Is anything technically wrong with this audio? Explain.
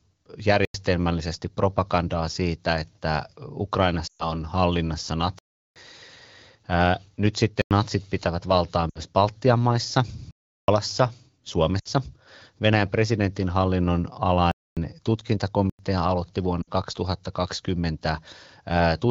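Yes, there are two kinds of dropout, repeating through the whole clip.

First, blocks of digital silence at 0.65–0.74, 5.39–5.76, 7.62–7.71, 10.31–10.68, 14.51–14.77 and 15.70–15.79 s. The short ones are about 93 ms, which fits a 4096-sample output buffer that didn't get filled in time. The two longer ones at about 370 ms point to a 16384-sample block. The one at 14.51 is about 250 ms. The sound drops straight to silence with no fade and jumps back, leaving a clear hole.

Second, lost AMR speech frames at 4.07–4.32, 8.90–8.99, 11.79–11.88 and 16.62–16.70 s. The call runs over the AMR wideband (HD Voice) codec at 15.85 kbit/s, and here radio errors corrupted frames, so the decoder kept repeating its last good pitch and vocal-tract settings while turning the gain down. The first event is about 120 ms, which fits six 20 ms frames. It drops to near silence within two frames, as wideband concealment does, before the speech comes back a bit weak and rough. 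The other three are about 60 ms each and drop to near silence in the same way.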